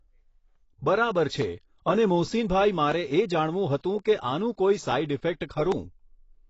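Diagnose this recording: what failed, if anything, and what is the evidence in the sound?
The speech is dull and smeared throughout, with nothing above 7.7 kHz and a fizzy, warbly edge on sibilants. That's codec stage, likely AAC compression at a low bitrate, something like 24 kbps, where the encoder pulls the cut-off down and quantises coarsely.

There are two sharp single clicks, at 1.42 s and 5.72 s, each a thin vertical line across the spectrum. That's dropped samples, likely at the driver or buffer stage. Less than a millisecond goes missing, so the waveform jumps abruptly.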